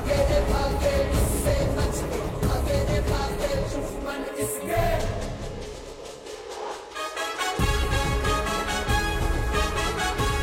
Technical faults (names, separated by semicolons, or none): none